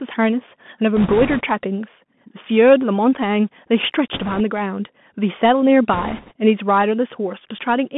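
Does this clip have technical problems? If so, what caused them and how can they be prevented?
Yes. The Bluetooth CVSD headset codec affects the whole clip. The speech sits in a narrow telephone band of roughly 150 Hz to 3.5 kHz, and the codec damage is plainly audible. CVSD sends a single up-or-down bit per sample and adapts its step size, so quick, loud high-frequency movement outruns the step. The result is gritty sibilants, slope-overload roughness and a grainy hiss beneath the speech, which fits a 64 kbps CVSD voice link. Choosing a wideband profile such as mSBC or LC3, or a wired microphone, prevents it.

Bit errors on a Bluetooth voice link appear at 0.96 to 1.42 s, 4.14 to 4.41 s and 5.93 to 6.33 s. During each stretch a rushing, crackly noise rides over the speech rather than sharp clicks. That happens because each CVSD bit nudges the waveform by only one small step, and the decoder's adaptation lets the error fade quickly. 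The density suggests an error rate of around 4 to 5 percent in these bursts. Keeping the headset close to the host, away from Wi-Fi and other 2.4 GHz congestion, prevents it.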